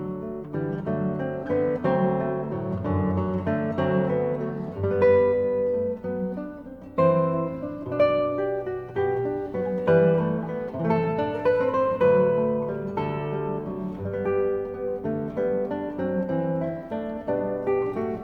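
From 0.57 to 4.73 s, crude rate conversion by linear interpolation, consistent with 44.1 kHz to 48 kHz, adds faint inharmonic fizz roughly 55 dB below the sound.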